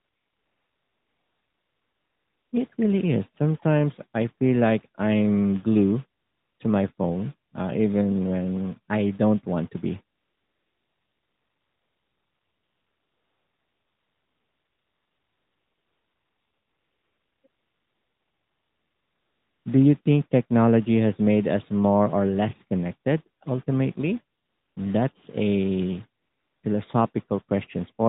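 AMR comfort noise appears in nine gaps between 0.0 and 26.6 s, longest from 10.16 to 17.44 s. With no speech frames sent, the receiver fills the silence with smooth synthetic noise that switches in and out, replacing the real background over the narrowband line.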